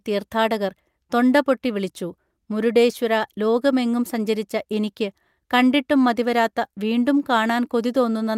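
No technical faults can be heard anywhere in this speech recording; the signal stays continuous and steady from its opening moment to its last.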